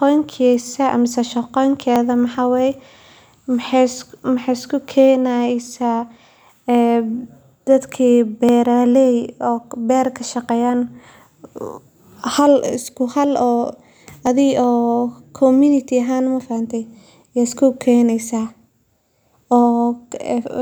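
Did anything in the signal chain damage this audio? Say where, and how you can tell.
Yes. Four isolated sharp clicks at 1.96, 5.67, 8.49 and 14.27 s each show up as a thin vertical line across the spectrum. These are likely dropped samples at the driver or buffer stage, where well under a millisecond of audio went missing and the waveform jumped straight to a later value. Nothing audible is lost, which is how this differs from a dropout. A dropout leaves a gap of silence, and these leave only a single discontinuity click.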